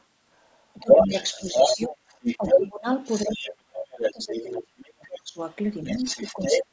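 From 0.0 to 5.18 s a second voice runs underneath, somewhat louder than the talker. This is the other side's voice leaking through, likely loudspeaker echo the echo canceller failed to remove. Between 0.74 and 5.4 s the talker's speech ducks by as much as about 25 dB, for around three seconds in total. This is speech suppressed in double talk, likely the canceller turning both voices down while both sides spoke at once. From 5.84 to 6.64 s the other voice returns at roughly the talker's level, again likely leaking echo. From 5.93 s to the end the speech briefly dips again, likely the same double-talk suppression.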